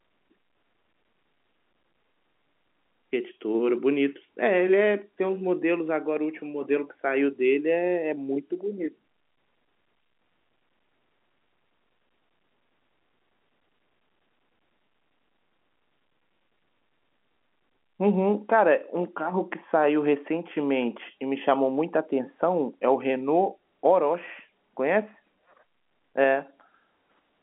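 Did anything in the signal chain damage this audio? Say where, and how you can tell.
No, nothing in the signal chain stood out as having damaged this speech when I listened to it.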